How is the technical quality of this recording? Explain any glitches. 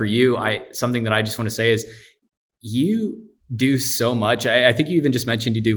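Listening through this speech recording, nothing stood out as a glitch or technical problem.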